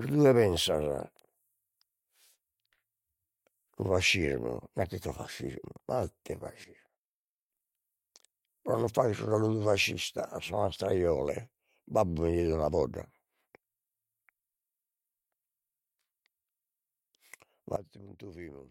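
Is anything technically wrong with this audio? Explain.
Yes. A sudden gain jump occurs twice, from 6.64 to 7.5 s and from 17.76 s to the end. A digital gain change was likely applied from one sample to the next with no ramp, so speech and background noise drop together abruptly, by about 12 dB and then about 18 dB.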